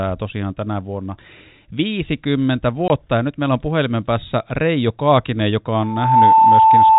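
At 2.88 to 2.90 s, packet loss filled with silence cuts a 20 ms hole in the speech, which fits one lost packet, with hard edges. From 5.80 s to the end, a loudspeaker feedback squeal appears: the mic-speaker loop runs away at 884 Hz, swelling over roughly 0.4 s to about 10 dB above the speech.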